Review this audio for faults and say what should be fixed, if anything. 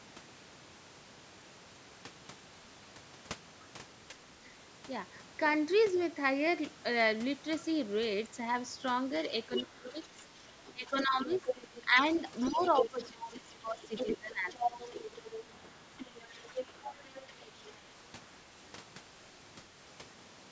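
Speech suppressed in double talk occurs at 4.09–4.16 s (a shallow dip of about 5 dB), 9.48–10.18 s (the deepest, around 25 dB), 10.73–11.96 s (about 10 dB), 12.49–14.78 s (about 15 dB) and 16.27–16.6 s (about 10 dB). The echo canceller likely misread the talker as echo and attenuated everything. On a waveform the envelope sags or gaps; a spectrogram shows the upper harmonics thinning below the 8 kHz band edge. A double-talk detector that freezes suppression while the near talker is active would prevent it.

The other side's voice leaking through runs from 9.53 to 11.82 s at about 5 dB below the talker, then from 12.4 to 17.71 s at about 10 dB below. Loudspeaker output likely reached the microphone without being fully cancelled, so a second, weaker voice overlaps the talker. A spectrogram shows a separate set of harmonic stripes interleaved with the main ones. Better acoustic isolation, or a longer adaptive filter with residual echo suppression tuned to this path, would prevent it.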